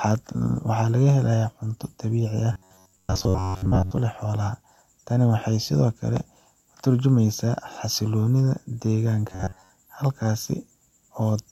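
At 2.53 to 4.01 s and 9.28 to 9.71 s, the speech becomes a rigid, metallic 94 Hz buzz: robotic sound from repeated short buffers, likely about 11 ms chunks looping.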